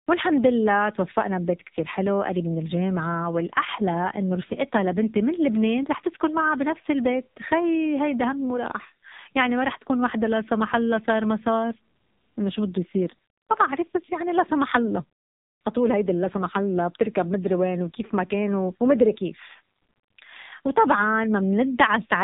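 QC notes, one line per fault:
Throughout: AMR narrowband mobile codec. The speech has no content above 4 kHz and a buzzy, synthetic edge. The heavy damage points to one of the low AMR-NB modes, around 6 kbps. At that rate the coder rebuilds each 20 ms frame from a vocal-tract filter driven by only a few excitation pulses per 5 ms subframe. The natural fine detail of the voice is replaced by this coarse pulse model, so it sounds dull and mechanical.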